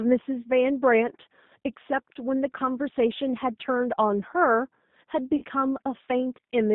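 Speech runs through the G.729 codec at 8 kbit/s throughout, band-limited to about 150 Hz to 3.7 kHz. Its rough, synthetic texture comes from pulse-based modelling, not simple lowpass dulling. From 5.36 to 5.45 s, VoIP packet loss concealed by the speech codec stretches about 60 ms of missing sound, which fits two lost packets, into a fading buzzy tone or coloured noise, where a jitter-buffer gap would give silence.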